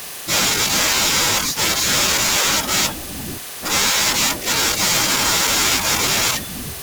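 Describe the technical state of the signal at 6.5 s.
At 6.5 s the speech carries sample clock jitter, present across the whole clip. The converter's timing wanders by around 7 µs, so samples land early or late, producing a hiss-like roughness about 10 dB below the signal that swells on loud, bright sounds and disappears in pauses.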